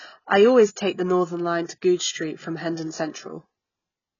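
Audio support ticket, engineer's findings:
Dull, smeared speech throughout, nothing above 7 kHz. Heavy AAC compression likely. Low-bitrate quantisation blurs detail, fizzes sibilants, fits roughly 16 kbps.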